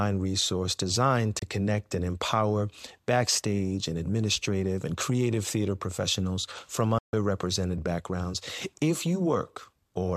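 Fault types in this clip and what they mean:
digital broadcast dropout: the receiver lost usable frames and muted, so the speech fades to silence within about 3 ms, for 24 ms at 1.39 s and 144 ms at 6.98 s. Unlike concealed packet loss, nothing fills the gap, and that audio is lost.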